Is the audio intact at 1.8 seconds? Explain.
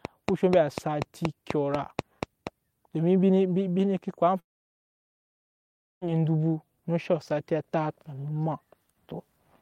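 No, 1.8 seconds falls inside a train of clicks running from about 0.05 to 2.48 s. You get roughly ten sharp ticks at a steady 4.1 per second, each much the same shape and standing out well above the speech, something like 15 dB louder at the peaks. It's likely something injecting a regular pulse into the signal, such as nearby equipment or a faulty connection or power supply, and the ticking carries straight through the pauses too.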